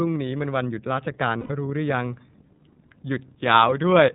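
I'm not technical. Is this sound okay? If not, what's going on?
No. The whole speech clip has passed through the iLBC codec, a phone-call voice compressor. It removes everything above 4 kHz, so it sounds narrow like a phone line, and it adds a plainly audible rough, slightly synthetic texture. That texture is what separates it from simple muffling.

There are also lost iLBC frames from 1.41 to 1.51 s, about a tenth of a second. Instead of a silent gap, the decoder stretches the last bit of voice into a short, held, faintly buzzy sound. Clear speech returns right after it, without a lingering smear.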